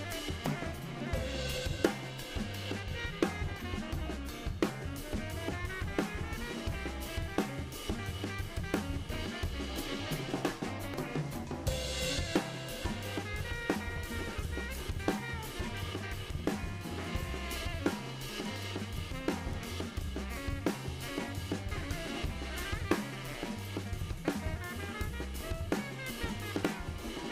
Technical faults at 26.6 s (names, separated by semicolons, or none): damaged data in a compressed stream